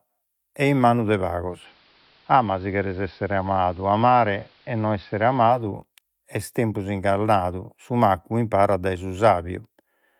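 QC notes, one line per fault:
1.45–5.69 s, digital radio blending to analogue: after "e in manu de" the receiver lost the digital stream and cross-faded over about 0.22 s to the station's AM broadcast, returning to digital before "est tempus". The AM path has a narrower bandwidth, so the speech turns dull and muffled, drops about 1 dB in level, and picks up a faint background hiss sitting well below the speech.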